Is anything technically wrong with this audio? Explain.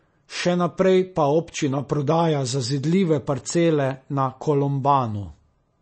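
Yes. MP3 compression runs throughout the speech: nothing survives above 8.3 kHz, and the sound is plainly watery and swirly, with metallic chirps on s sounds. The likely cause is an encoder short of bits, which fits a bitrate around 32 kbps, cutting the treble and flickering weak frequency lines between frames.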